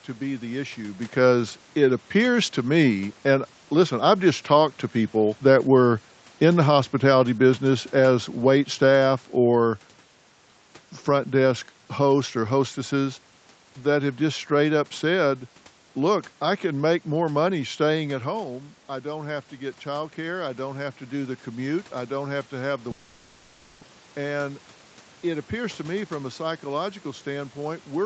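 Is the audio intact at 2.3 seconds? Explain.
Yes, at 2.3 seconds the speech comes through intact, with no dropout, glitch or distortion at that moment.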